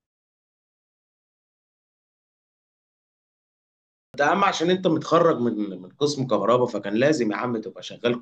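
The output device went idle during the opening pause of about 4 seconds and had not fully woken when sound returned, producing a clipped start after a pause at 4.06 s. About 81 ms of speech is swallowed, so the first word begins abruptly, missing its opening sounds.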